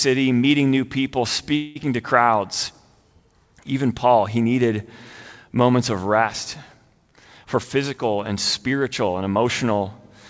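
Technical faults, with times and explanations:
1.56 to 1.77 s, call audio freeze: Packets were most likely held up in transit, leaving the jitter buffer empty for about 194 ms. The receiver kept the last sound going as a fading buzz or hiss instead of dropping to silence. When the packets arrived, playback resumed exactly where it had paused. Nothing is lost, but the sound now runs about 194 ms later than before. Because the fill tails off, the break sounds smeared rather than cut.
7.44 to 9.79 s, jitter buffer speed-up: The buffer held more audio than its target. The receiver worked that surplus off by repeatedly trimming pitch-period-sized pieces, about a fifth of a second in total. Over this stretch the sound plays at roughly 108% speed with its pitch unchanged, so it comes across as slightly rushed rather than higher. The G.722 path's upper limit of 8 kHz is unaffected.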